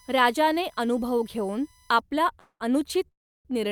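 A speech clip with a USB whine from the start to 2.0 s: a fixed tone built on 1 kHz, strongest at its 6 kHz harmonic, sitting around 35 dB below the speech. USB current drawn in 1 ms frames leaks into the audio through power or ground. On a spectrogram it shows as thin, perfectly flat horizontal lines at 1 kHz multiples, brightest at 6 kHz, unaffected by the speech, and they stop at 2.0 s. Two call audio freezes follow, likely from delayed packets draining the jitter buffer. From 2.39 to 2.62 s the last sound is stretched into a fading buzz or hiss that reaches silence for about 70 ms. From 3.08 to 3.47 s the hold lasts longer, with about 310 ms of silence. Speech then resumes exactly where it stopped, so nothing is lost, but the timing is pushed back by 0.21 s and 0.37 s. A waveform shows a smeared, decaying tail narrowing to a flat line before the speech returns, and a spectrogram shows a smeared, repetitive band fading into a blank gap.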